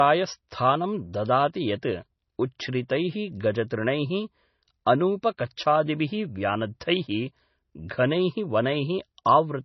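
Throughout, the speech is dull, with nothing above 6 kHz, and sounds watery and swirly, likely MP3 compression at a very low bitrate such as 24 kbps, unlike plain low-pass filtering. At 9.25 s, pre-echo puts a brief 10 ms hiss just before an attack, because codec noise spreads backward across the block, unlike a click, which lands on the attack.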